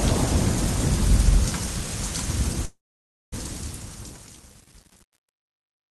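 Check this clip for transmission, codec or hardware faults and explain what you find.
Two faults turn up, both riding on the fade-out that starts around 2.5 s.

Truncation distortion on the fade runs from 2.48 s to the end and gets properly bad from 3.42 s. The fade is being computed without dither at what sounds like about 8 bits, so as the level drops the waveform collapses into a few coarse steps. That's why the tail goes gritty.

The call audio freeze lasts from 2.65 to 3.34 s. The sound smears on briefly as a fading buzz or hiss and then drops to silence for roughly half a second. This is likely the jitter buffer running dry while packets were held up. When the audio resumes it picks up right where it stopped, so nothing is lost, but about 0.67 s of delay has been inserted.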